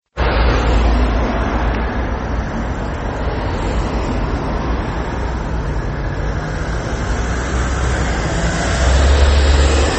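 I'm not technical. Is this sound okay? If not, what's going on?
No. Throughout, the treble stops near 8.3 kHz and the sound turns watery and swirly. This is likely heavy MP3 compression squeezing the file too hard.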